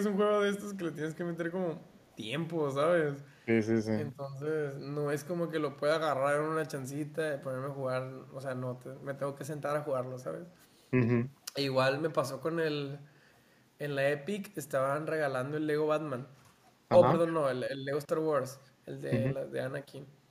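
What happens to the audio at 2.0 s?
Around 2.0 s there is an echo leak, running from 1.86 to 2.13 s. The likely cause is an echo canceller on a loudspeaker-side endpoint that failed to fully remove what its microphone captured, so a remnant of the speech was returned down the line. It is heard as a brief, very faint delayed copy of the speech, trailing about 310 ms behind the original and sitting far below the direct sound.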